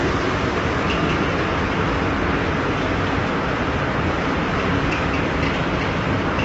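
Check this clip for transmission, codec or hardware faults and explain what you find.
One codec fault runs through the whole clip, likely low-delay AAC compression. Its short frames cannot spend enough bits on fine spectral detail, so the audio turns grainy and rough, consistent with roughly 24 kbps, with nothing above 7.8 kHz.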